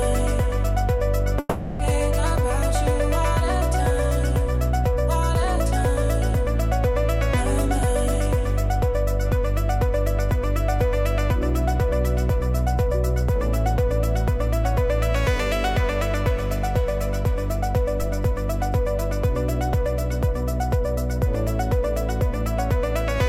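At 1.39 to 1.81 s the audio gives way to a fading buzzy continuation for about 0.4 s, never reaching silence, and resumes with that stretch missing: a long network dropout, likely from lost packets, not a brief glitch. At 18.02 s a DC step produces a low thump or click, the offset decaying away through a roughly 2 Hz high-pass while the sound carries on unaffected.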